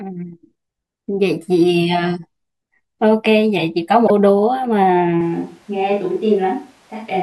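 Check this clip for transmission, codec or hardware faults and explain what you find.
Two faults are audible in this speech clip: a short corruption in the compressed stream and a change to a more distant microphone for the final stretch.

Damaged data in a compressed stream, 4.04 to 4.11 s: a few frames of the encoded data arrive wrong, so the decoder cannot read them. It loses sync and has to hunt for the next valid frame header before playback resumes. The 70 ms gap is heard as a brief chirp or blip in the speech.

Switch to a distant microphone, 5.21 s to the end: from this point the close microphone's signal appears to drop out, and the audio most likely comes from a microphone further away. The change is abrupt. The speech turns roomy and hollow and loses some of its bass, while the overall level stays about the same. Background room noise sits roughly 35 dB below the speech.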